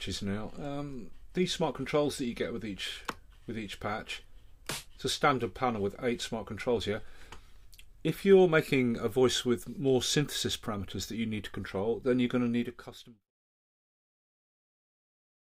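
Nothing's wrong with this one: the audio just eases out with a gentle editor's fade that begins around 12 s and finishes at 13.32 s, with no click or hard edge.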